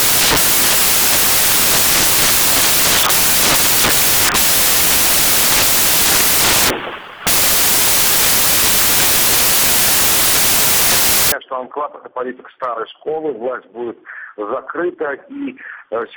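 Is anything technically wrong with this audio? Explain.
Yes. From the start to about 11.32 s you've got samples built from the wrong bytes: the reader stitches each sample's bytes together wrongly, so the jittery low bits end up dominating. That's why it comes through as loud, harsh noise, close to white on the louder sounds.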